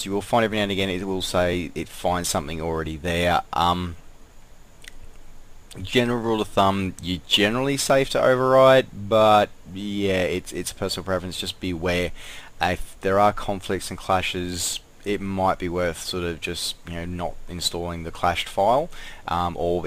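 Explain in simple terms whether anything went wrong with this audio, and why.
Two small glitches occur, at 1.53 s and 7.90 s. Each is a quick jump where the sound skips forward, losing a few milliseconds at the first and only a millisecond or two at the second. This is likely a dropped buffer (overrun): the recording program fell briefly behind, a tiny chunk was overwritten before it was saved, and the audio on either side was joined directly. Unlike a dropout, there is no gap of silence, only a skip.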